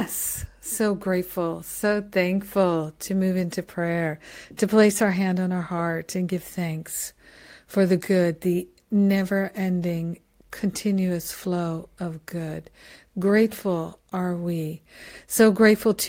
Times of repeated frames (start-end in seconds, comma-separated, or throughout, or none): none